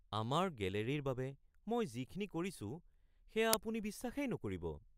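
At about 3.53 s there's an uninitialised buffer: a block got played out before any audio was written into it, so whatever junk sat in memory went out as samples. It's a tiny, loud crack, about 2.67 ms long, which fits a 128-sample buffer.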